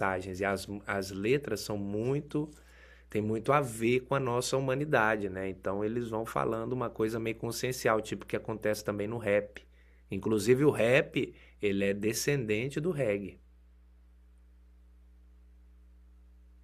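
Mains hum runs under the speech from start to finish, a steady low tone at 60 Hz sitting roughly 25 dB below the speech. It comes from the power line leaking into the signal path, most plausibly through a ground loop between connected equipment or from a transformer close to the cabling. Because the hum is constant in pitch and level, it is most exposed in the pauses, where it lingers as a dull drone.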